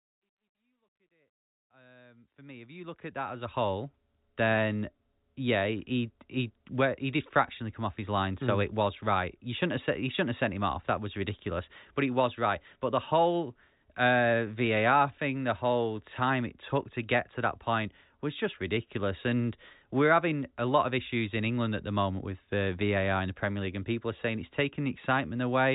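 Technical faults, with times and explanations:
Nothing here counts as a technical fault: the gentle fade-in over the first few seconds and the telephone-band sound, with nothing above about 3.8 kHz, are just how the clip was made.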